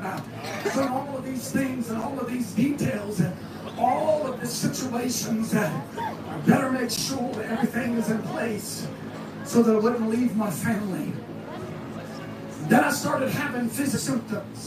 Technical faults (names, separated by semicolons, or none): compressed frames skipped